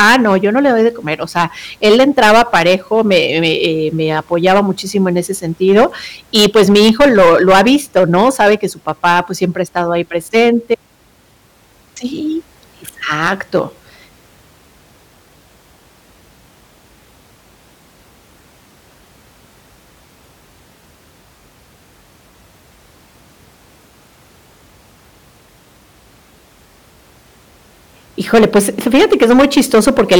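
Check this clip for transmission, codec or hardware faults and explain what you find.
One fault runs through the whole recording: hard clipping. The speech reaches a converter or gain stage about 14 dB hotter than it can pass, so every peak beyond the ceiling is sliced flat. Only a few percent of the samples hit that limit, but they fall on the loudest moments throughout. The squared-off tops add high harmonics that were never in the speech, so each loud syllable carries a harsh, crackling fuzz.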